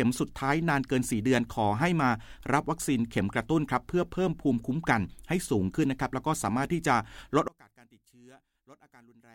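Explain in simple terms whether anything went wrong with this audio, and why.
From 7.48 s until the end, the speech nearly vanishes into a faint trace, likely because one channel was inverted, cancelling the other.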